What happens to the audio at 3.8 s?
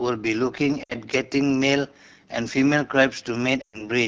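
At 3.8 s the audio is inside a burst of lost AMR speech frames running from 3.61 to 3.88 s. Radio errors corrupted a run of frames so they failed their checksum, and the AMR decoder filled the gap by reusing the last good pitch and vocal tract settings while ramping the gain down. The speech drops to near silence within two frames, as wideband concealment does, before the voice returns briefly weak or rough.

Underneath this, the whole clip passes through the AMR wideband (HD Voice) codec at 8.85 kbit/s, one of its lowest rates. The model reproduces speech only up to 6.4 kHz and fills the band up to 7 kHz with shaped noise. At this rate the coding damage is plainly audible as a rough, raspy texture on the speech.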